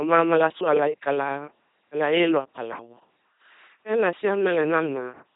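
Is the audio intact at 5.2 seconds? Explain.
No. At 5.2 s the speech is still passing through the LPC-10 vocoder artefact that runs through the whole clip. The coder models each short frame with a simple vocal tract filter and excites it with either a pulse train or noise, never a mix. The result is a heavily damaged, buzzing, mechanical robot voice with nothing above about 3.8 kHz, which fits a 2.4 kbit/s LPC-10 channel.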